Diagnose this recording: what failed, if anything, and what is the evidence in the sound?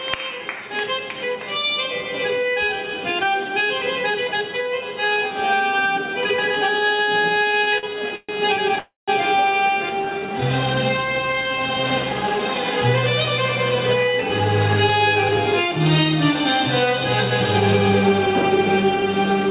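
Repeated stalls (stutter) at the network and jitter buffer stage, 7.22–8.79 s: fifteen short gaps, the longest 131 ms, fill about a fifth of the span. The waveform shows repeated, smeared copies of the preceding cycles.

Call audio freeze, 8.79–9.10 s: a 290 ms gap of continued sound fading away, the last 160 ms of it silence, likely caused by packets held up in the network while the jitter buffer ran dry. The spectrogram shows a fading smear, then a blank column.

Jitter buffer slow-down, 10.13–12.41 s: duplicated pitch periods add 157 ms, playing at 93% speed with unchanged pitch. Harmonic lines look stretched horizontally in the band below 4 kHz.

Jitter buffer speed-up, 14.22–17.31 s at 103% and 18.09 s to the end at 104%: the buffer drains excess delay by cutting periods, removing roughly 100 ms and 70 ms. Features appear slightly compressed in time.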